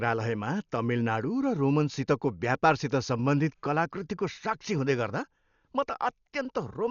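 From start to end the speech is heavily damaged by what is likely Dolby Digital compression. Nothing survives above 7 kHz, so the sound is dull, and many frequency lines have been coded without real detail and refilled with noise, giving a rough, fluttering hiss around voiced tones. That noise-filled texture, rather than the metallic swirl of MP3 or a clean roll-off from filtering, marks it out, and the damage fits a bitrate near 48 kbps.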